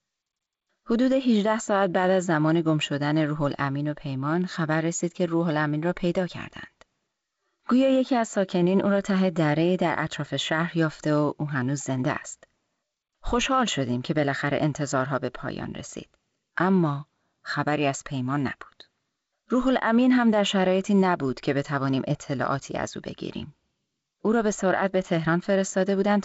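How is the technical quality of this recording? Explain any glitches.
The technical quality holds up, and there are no glitches to explain in this G.722 wideband telephone speech.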